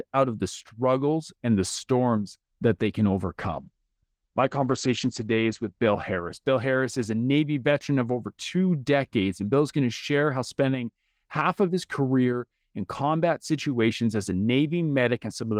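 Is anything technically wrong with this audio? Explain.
Yes. From 3.43 s, just after "storms that they can", to 7.93 s, before "of over two decades", there is a call bitrate drop. The call's bandwidth estimate fell, so the encoder coded the speech more coarsely, which fits a fall from about 32 to about 11 kbps. The top end narrows from 20 kHz to 8 kHz, so the speech sounds muffled and rough, worst for about 1.7 s, then clears. Packet loss would cause dropouts or glitches instead of this steady, continuous dulling.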